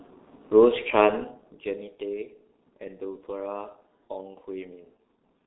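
Throughout, the speech sounds muffled and hoarse, with smeared consonants and nothing above 3.8 kHz: heavy G.723.1 codec damage, consistent with a telephony stream near 6 kbit/s.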